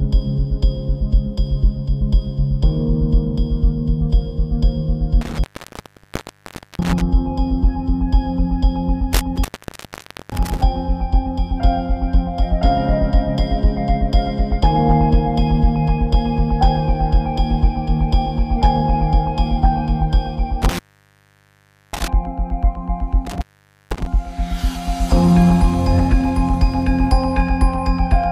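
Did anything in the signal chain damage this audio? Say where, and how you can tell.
Yes. Intermittent contact in the analogue wiring at 5.21–7.01 s, 9.13–10.63 s, 20.62–22.08 s and 23.27–24.06 s. A loose cable or plug opens, dropping the sound for 1.35, 0.87, 1.14 and 0.49 s, with crackle at each break and hiss in the gaps.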